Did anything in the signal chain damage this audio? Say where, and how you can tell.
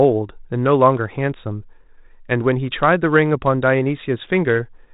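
No, nothing in the chain damaged this speech; it sits within the telephone band of a 32 kbit/s G.726 ADPCM path, with nothing above 4 kHz and only the faint coding grain that rate leaves.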